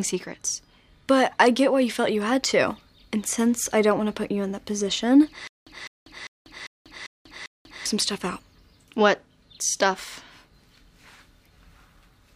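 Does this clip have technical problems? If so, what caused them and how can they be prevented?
Yes. From 5.47 to 7.86 s the playback or stream likely stalled, and at each retry it replayed its last fragment before running dry. The result is a stutter with silent gaps: a 205 ms burst repeats six times, separated by 192 ms of digital silence, giving a steady 397 ms cycle, and the audio that should have played in that span is lost. More playback buffering and a steadier data supply would prevent it.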